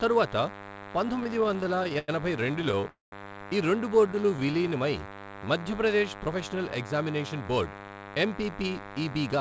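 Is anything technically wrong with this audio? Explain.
Yes, several faults affect this speech clip, which comes through a call path whose audio stops at about 8 kHz, consistent with a G.722 codec.

Throughout, a DECT cordless phone buzz is present: a nearby DECT handset or base emits a radio burst every 10 ms, which the audio circuitry rectifies. The result is a thin, steady 100 Hz buzz rich in harmonics, sitting about 15 dB below the speech.

From 1.16 to 2.85 s, and again from 4.07 to 4.70 s, there are repeated stalls (stutter). Packets arrived late, so the jitter buffer kept running dry and the receiver stretched the last sound to cover each wait. The first stretch has 26 such gaps totalling 339 ms, the longest 94 ms. The second has 10 brief gaps totalling 100 ms. The speech drags and stutters without losing content.

At 2.89 to 3.14 s, a call audio freeze occurs, likely from packets held up in transit emptying the buffer. 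About 234 ms is filled in, including 160 ms of silence, and then the speech resumes exactly where it stopped, shifted later.

From 4.01 to 5.72 s, a jitter buffer slow-down is audible. The receiver rebuilt its reserve by repeating single pitch periods and pause fragments, adding 175 ms. Speech plays at 90% speed with unchanged pitch and drawn-out sounds.

From 7.41 to 9.38 s, a jitter buffer speed-up follows. With surplus audio buffered, the receiver trimmed short pitch-period pieces, roughly 200 ms in all. Speech runs at 110% speed at the same pitch and sounds hurried.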